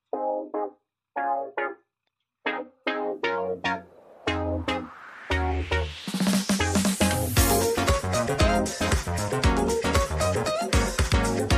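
No technical faults detected.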